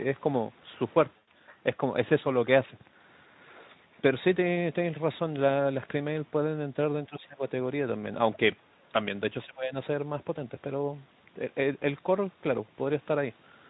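A speech recording carried over a call path, with only a shaped, noise-like fill above 8 kHz and the light hoarseness of a Speex stream at about 15 kbps. At 1.17 to 1.28 s, VoIP packet loss concealed by the speech codec replaces about 100 ms of audio, which fits five lost 20 ms frames. The decoder extends the last pitch and filter shape, so the speech briefly turns into a buzzy tone or coloured noise that weakens as the gain is stepped down. On a spectrogram, the harmonics run flat and blurred across the gap instead of moving. The waveform shows a repetitive, shrinking envelope. Later, the speech drops in level three times: at 7.08 to 7.42 s by about 15 dB, at 8.70 to 8.93 s by about 30 dB, nearly cutting out, and at 9.45 to 9.72 s by about 15 dB again. This pattern fits speech suppressed in double talk, likely an echo canceller turning the talker down while the far side was speaking. In the waveform, these show up as sudden notches in the envelope. 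On a spectrogram, the energy fades in those spans, most deeply at 8.7 s.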